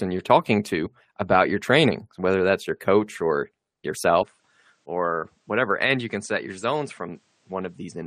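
Brief skips at 0.85 s, between "you're talking" and "about your training whether", and at 3.94 s, after "that's your coach or", mark compressed frames skipped. The decoder drops whole frames, and about 50 ms and then a short fraction of that go missing. From 4.23 s the sound turns duller, cut above 9.6 kHz and about 5 dB quieter, with fresh faint noise and no gap. That is likely the input switched to a poorer device.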